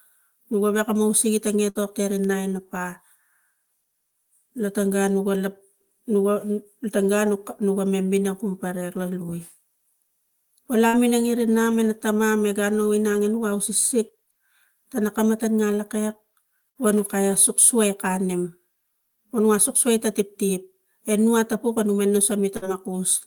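A burst of packet loss hits this speech recording four times, at 1.69 to 1.78 s, 10.87 to 10.96 s, 16.69 to 16.78 s just after "tana kamata nanglokek", and 22.57 to 22.65 s. Each time, consecutive packets failed to arrive, so the receiver stretched the last sound for 50 to 61 ms while fading it out. You hear a brief held buzz or hiss, then the audio jumps ahead, skipping about 60 ms.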